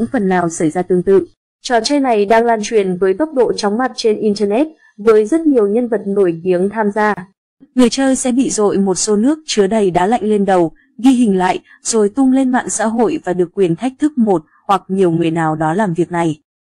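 At 7.14 to 7.17 s the sound drops out for about 31 ms, with smeared edges, then resumes where it stopped. This is a gap at a join of encoded pieces: separately encoded segments were butted together untrimmed, keeping each run's start delay and last-frame padding.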